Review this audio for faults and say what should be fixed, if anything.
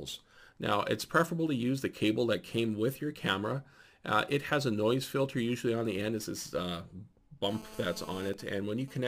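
From 7.49 to 8.29 s there is GSM phone buzz: a hard, raspy 217 Hz tone rich in harmonics, about 18 dB below the sound. A nearby 2G phone in a call pulses its transmitter 217 times a second, and the audio circuitry rectifies those radio bursts. Unlike mains hum, 217 Hz is not a multiple of 50 or 60 Hz, and the buzz is edgy rather than smooth. Keep phones switched off or in airplane mode near the recording chain.

From 8.34 to 8.94 s come GSM signalling bursts, even ticks with a longer 217 Hz buzz twice a second, roughly 25 dB down. The same call is still running, but with its user silent, so the phone transmits only sparse burst groups that the circuit again rectifies. The broken rhythm is what separates it from the continuous buzz before it. Shielded, balanced cabling and distance from handsets prevent this.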